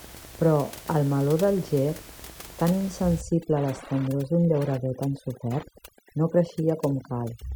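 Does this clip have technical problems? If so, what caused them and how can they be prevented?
Yes. A nearby Wi-Fi radio is coupling into the audio circuit, which rectifies its beacon every 102.4 ms. The result is Wi-Fi interference throughout: a steady ticking near ten times a second, roughly 25 dB below the speech. Keeping phones and routers away from the microphone, preamp and cables, and using shielded, balanced connections, prevents it.

From 3.21 s to the end, noise reduction set too strong produces overdone noise removal. It cuts frequency bands that sit close to its noise estimate, so the background drops and breaks up into twinkling specks. Using a gentler reduction setting, or capturing less noise at the source, prevents it.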